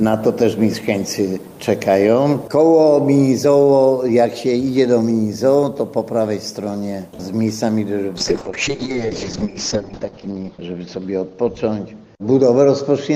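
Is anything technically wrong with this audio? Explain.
Yes. From 8.2 s to the end, the audio turns rough and watery and loses its top end above about 8 kHz. This is a call bitrate drop: the encoder was starved of bits. The sound fits a fall from around 48 kbps to 6 kbps, held lowest for about 1.8 s.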